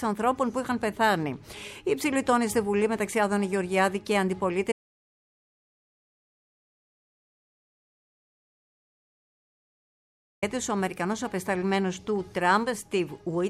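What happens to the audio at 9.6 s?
At 9.6 s the clip is inside an audio dropout to silence running from 4.72 s to 10.42 s, about 5.7 s long. The sound cuts off abruptly into silence with no room tone. The likely cause is the input being lost while the recorder kept writing samples. The sound returns mid-flow at 10.42 s.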